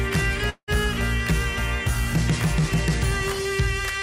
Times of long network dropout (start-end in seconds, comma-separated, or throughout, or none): 0.49-0.70